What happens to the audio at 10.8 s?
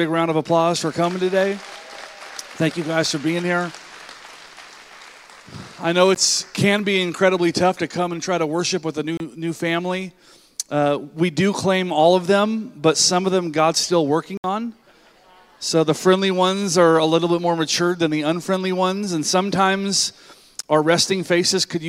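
Nothing goes wrong at 10.8 s; the audio there plays through intact, with no dropout, click, distortion or other fault.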